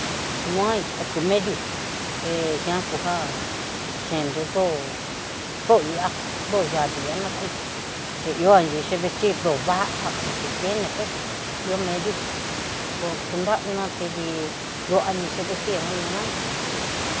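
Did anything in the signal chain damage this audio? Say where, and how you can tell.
No, nothing in the chain has damaged this speech; what you hear is just the room's own background noise, sitting about 17 dB and in places about 9 dB below the talker, plus the usual call microphone processing, which trims the lowest bass and leaves nothing above 8 kHz.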